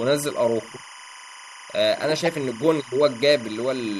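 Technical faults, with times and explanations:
Throughout, timecode bleed: there's a steady chirpy warble sitting roughly 20 dB under the speech, flipping between about 1 kHz and 2 kHz. That's linear timecode at 25 frames per second leaking in from a neighbouring track or cable, its square wave switching pitch as the bits change.
2.25 to 2.27 s and 3.45 s, corrupt frame decoded: two short glitches where a damaged compressed frame got played anyway, probably a couple of frames each time. The first is loud, peaking around -10 dBFS, and the second is faint, near -35 dBFS. Misread data puts energy at the wrong frequencies for about the length of each damaged frame.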